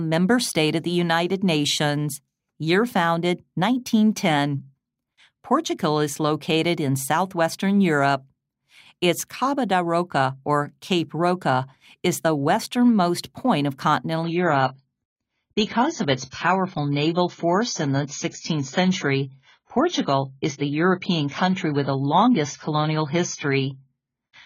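At 14.23 s the speech drops abruptly in quality, with no gap, and stays that way to 24.45 s. It is an adaptive stream at a lower bitrate. A slowed connection forced a cheaper version. Nothing remains above 7 kHz, and the artefacts fit 16 kbit/s AAC.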